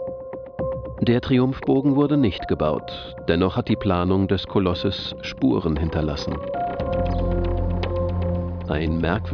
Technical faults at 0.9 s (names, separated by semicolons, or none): none